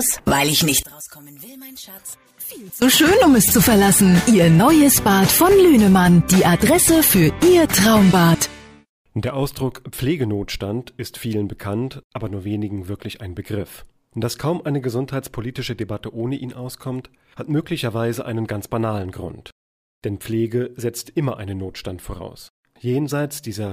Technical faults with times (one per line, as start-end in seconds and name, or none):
0.83-2.82 one channel inverted